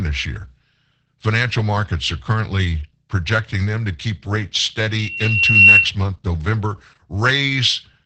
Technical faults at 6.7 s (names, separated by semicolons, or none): Opus voice compression